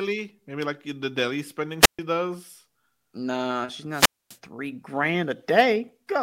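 Speech with two wireless microphone squelch dropouts: one from 1.81 to 1.99 s, just after "like the daily spending", with a mute of 0.13 s, and another from 3.91 to 4.38 s, with a mute of 0.25 s. In each, the FM radio link fades, hiss swells, and then the receiver's squelch cuts the output to near silence. A digital packet dropout would instead be a clean gap or glitch with no hiss leading into it.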